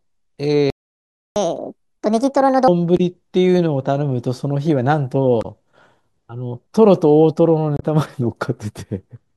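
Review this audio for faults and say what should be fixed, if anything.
The speech cuts out at 0.70 s and stays silent until 1.36 s, a playback stall of about 0.66 s. The likely cause is the player running dry or its thread getting blocked. A deeper buffer and a playback thread that nothing else can block would stop it.

Right after that, from 1.36 to 2.68 s, there's a catch-up at higher speed. The player pushes through its backlog at 1.5x by resampling, so the voice runs fast and rises about seven semitones before dropping back. Time-stretching without the pitch shift, or simply skipping ahead, would avoid the chipmunk stretch.

There are three short glitches at 2.97–3.00 s, 5.41–5.45 s and 7.77–7.83 s, each a few tens of milliseconds. That's damaged data in a compressed stream: the decoder hits bad frames, loses sync and lurches to the next header. Checksummed transport and clean handling of inserted metadata would prevent it.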